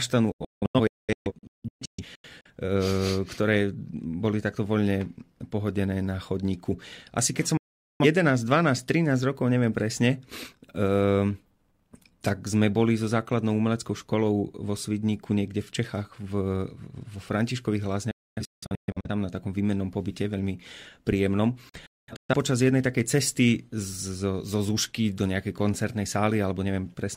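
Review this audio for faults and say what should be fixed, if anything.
Digital broadcast dropouts cut the speech four times. From 0.32 to 2.50 s there are scattered holes of up to 0.21 s each. A solid mute runs from 7.57 to 8.05 s. Broken gaps fall at 18.11–19.09 s, before "na takom výmennom pobyte", and at 21.69–22.34 s, between "výmennom pobyte veľmi príjemnom" and "počas jednej takej cesty". The receiver lost frames and muted, each cut with a 3 ms fade. On a waveform these show as flat silent stretches with steep edges, and a spectrogram shows them as blank vertical bands across all frequencies. Stronger reception or a better antenna position would prevent them.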